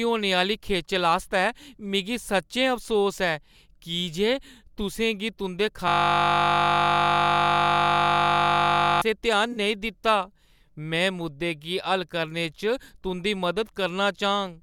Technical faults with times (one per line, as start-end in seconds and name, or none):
5.88-9.02 system hang loop
9.52-9.58 AAC frame loss with concealment